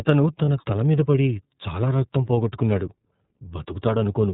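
Throughout the clip the speech carries the iLBC codec's narrowband signature. Nothing above 4 kHz gets through, and the voice has a plainly audible rough, slightly synthetic grain. That grain comes from coding the excitation of each frame independently, and it points to iLBC's 30 ms mode at roughly 13.3 kbps. A simple low-pass filter would dull the sound without adding that buzzy texture, and a generic telephone band-limit would leave the waveform smooth.

From 0.45 to 0.48 s one 30 ms frame is missing, and this is lost iLBC frames. The decoder fills the hole by repeating the last pitch cycle mixed with noise, which sounds like a brief held, faintly buzzy vowel rather than silence or a click. A dropout would leave a hard gap, and a looped-buffer glitch would stutter. Here, because each iLBC frame stands alone, the voice snaps back cleanly on the very next frame with no lingering smear.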